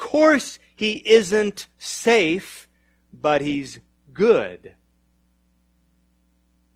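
From the start to about 5.26 s the speech sounds dull and smeared, with thin, swirly treble and stronger codec artefacts, which fits an adaptive stream starting at a low bitrate, around 24 kbit/s Opus. Then it snaps cleaner without a gap, suggesting a step up to roughly 64 kbit/s.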